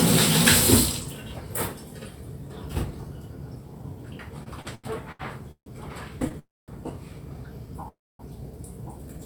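From 4.43 to 6.35 s there are repeated stalls, a stutter: the buffer keeps running dry, so eight short gaps, the longest 148 ms, get filled by stretching the last sound. It drags but nothing's lost.

Then come two call audio freezes, at 6.39 to 6.70 s and 7.88 to 8.21 s. Each time the last sound hangs on, fades to silence for about 0.2 s and 0.25 s, then resumes right where it stopped. That's likely packets held up in transit.

Right at the end, from 9.08 s, a jitter buffer slow-down repeats tiny slices to rebuild its reserve, adding 48 ms. Playback drops to 79% speed at unchanged pitch, sounding drawn out.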